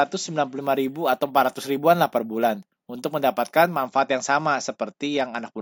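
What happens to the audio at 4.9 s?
Nothing goes wrong at 4.9 s; the speech continues intact through that moment with no dropout, click, distortion or other fault.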